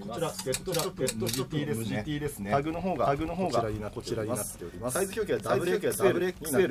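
From start to finish, every sound is heard twice. A second copy trails the first by about half a second. It arrives at roughly the same level as the original. This is a doubled audio track. The copy is full-band and dry, with no decay or room colour to soften it. That points away from a real echo. The likely cause is the same audio being captured again through a slower path and mixed back in.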